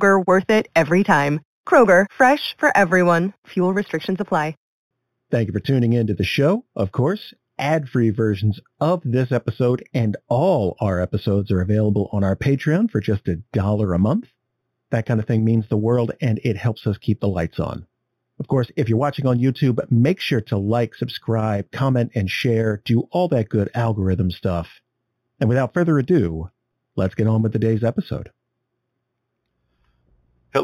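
Throughout the speech, imaging from linear upsampling is heard, which fits audio raised from an 8 kHz rate by straight-line interpolation. That weak filter dulls the top of the band and leaves a faint mirrored copy between 4 and 8 kHz, roughly 30 dB down, giving sibilants a light metallic shimmer.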